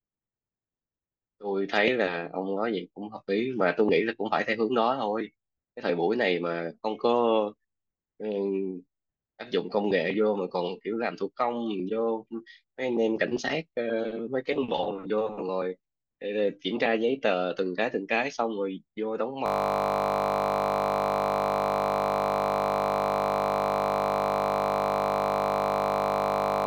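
A system hang loop takes over at 19.46 s and runs to the end of the clip. The machine or its audio driver stalled while the sound hardware kept replaying the last ring buffer it held, so one 20 ms slice of the speech repeats exactly, about 360 times. Because the slice is so short, the repetition fuses into a steady, flat buzz at 50 Hz, the loop rate, in place of the speech.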